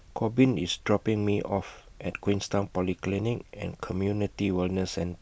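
Nothing goes wrong anywhere in this bit of speech, so there's no technical fault to point to at any moment.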